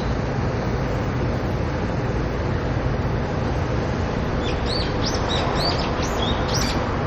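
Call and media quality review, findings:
MP3 compression, likely from a low-bitrate encode, consistent with about 48 kbps, throughout: watery swirling texture, metallic chirps on bright transients, smeared attacks.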